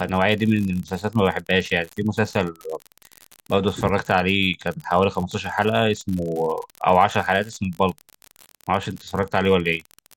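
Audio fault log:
throughout, unreliable data bit: one marginal data line flips its bit in a random share of samples, so each error lands as an identical spike of about -21 dBFS. The result is a steady crackle, a fine fizz that continues through the pauses between speech.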